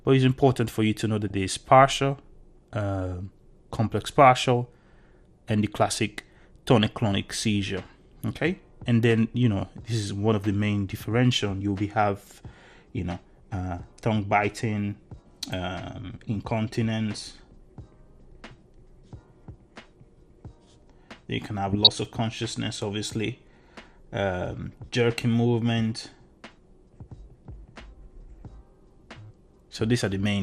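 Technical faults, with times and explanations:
Throughout: MP2 compression. The sound is dull, with the top end thinned and flickering in and out, and a gurgling, granular roughness sits under everything. This is likely MPEG Layer II coding at a low rate, around 80 kbps. The 32 sub-bands get too few bits, so upper bands drop out and the remaining ones are coarsely quantised. Unlike the burbling events, this damage is steady across the whole clip rather than arriving in sudden bursts.
1.28–1.34 s and 21.71–21.94 s: DAB burbling. Short bursts of noisy blips break over the programme. The first is a brief blip and the second lasts roughly a quarter of a second. Bit errors from weak reception have slipped past error correction into the MP2 data. Corrupted samples put short blips of noise into individual sub-bands, and the second event spans several consecutive frames. Unlike the constant codec dullness, these are abrupt, localised bursts that come and go.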